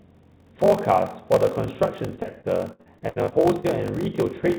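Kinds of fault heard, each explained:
Block size mismatch (padded): A steady low buzz near 46.9 Hz runs under the whole recording, and the speech drags at about 0.86 times its normal speed while the timbre stays roughly where it should. Each block handed downstream is shorter than the block the next stage reads, which fits a 1024-sample read size. The shortfall is filled with zeros, so a tiny silence lands in every block, producing the buzz and the slowdown.
Repeated packet loss (robotic sound): From 2.16 s to 3.66 s the speech turns choppy, with pieces of it dropping out. Roughly a dozen holes open up in this stretch, the longest 64 ms, adding up to about 360 ms of missing sound. About 356 ms of that is patched by stretching out the preceding sound, so roughly a quarter of the span is concealment. The fills sit within the call codec's band, which stops at 4 kHz.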